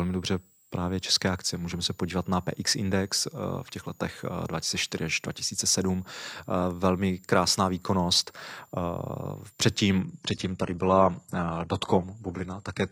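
Speech carries a switching supply whistle throughout: a thin, high tone wandering between about 6.7 and 8.3 kHz, centred near 7 kHz and roughly 35 dB below the voice. On a spectrogram it shows as a faint, drifting horizontal line that persists through pauses. At 10.0 s an adaptive stream at a lower bitrate takes over until the end at 12.9 s. The quality drops suddenly with no gap, and codec artefacts rise, which fits a switch from a 96 kbit/s AAC version to a 16 kbit/s HE-AAC one. A spectrogram shows an abrupt change in the upper-band texture at that point, while the waveform stays continuous.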